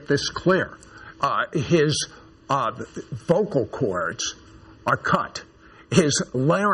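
Throughout the clip, channel delay (comb filtering) makes the audio sound hollow and phasey. One channel runs a little under a millisecond behind the other, and summing them cancels energy from about 700 Hz upward at regular intervals. A spectrogram shows evenly spaced dark horizontal notch bands.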